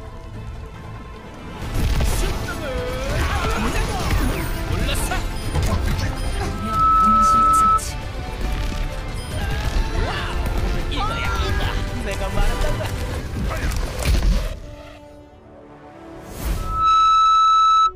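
At 6.51–7.81 s and again at 16.56–17.93 s, loudspeaker feedback squeal: the microphone re-amplifies its own loudspeaker output, and a 1.3 kHz tone swells within about a third of a second to roughly 10 dB above the sound, showing as a bright horizontal spectrogram line.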